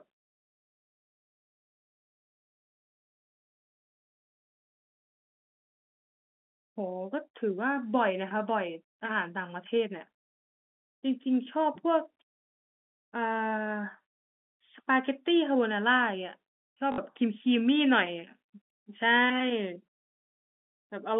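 At 16.92 s there's a short robotic stutter lasting until 16.98 s: packet loss with the last packet repeated. About 60 ms went missing, which fits three 20 ms packets, and the receiver kept replaying the last good one, so you get a brief 50 Hz buzz. The G.711 telephone coding underneath keeps everything inside the 200 Hz to 3.5 kHz phone band.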